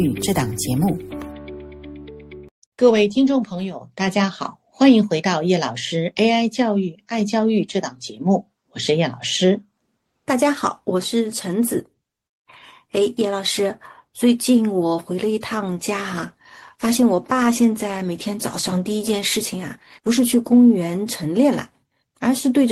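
The audio, carried over an Opus call path, suffers a call bitrate drop from 15.65 to 21.65 s. It turns coarse and duller for about 4.9 s at its worst, which fits the encoder falling from 32 to 15 kbps. Unlike packet loss, it never drops out or stutters.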